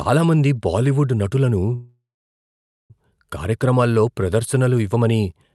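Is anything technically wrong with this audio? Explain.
Yes, there's a call audio freeze from 1.75 to 2.93 s, right after "మంది బాలీవుడ్ నటులను". The last sound stretches into a fading buzz, then about 0.87 s of silence. The likely cause is delayed packets draining the jitter buffer. Speech resumes at "కార్యక్రమాల్లో ప్రదర్శనలు ఇవ్వమని" with nothing lost, just a 1.14 s gap that pushes everything after it later. The call codec limits the band to about 12 kHz throughout.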